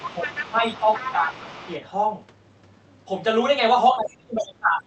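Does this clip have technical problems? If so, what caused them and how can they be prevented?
Yes. The echo canceller on the talker's device likely failed to remove the loudspeaker signal fully from the microphone, so the other side's voice leaks through at 0.00–0.51 s, 0.72–1.12 s and 1.29–1.69 s. It sits about 10 dB below the main speech in the first two stretches and about 20 dB below in the third, heard as a second voice under the talker. A headset, or a longer echo-canceller filter with better loudspeaker-to-microphone isolation, would prevent it.

Where both sides talked at once, the canceller likely could not separate its own talker from the echo and turned everything down, causing speech suppressed in double talk. The talker's level dips at 0.22–0.64 s (by roughly 10 dB), 0.81–1.21 s (by around 5 dB) and briefly at 1.43–1.51 s (by roughly 10 dB). From 3.91 s to the end it drops much harder, by around 25 dB. 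Tuning the double-talk detector to keep full duplex rather than suppress, or using a headset, would prevent it.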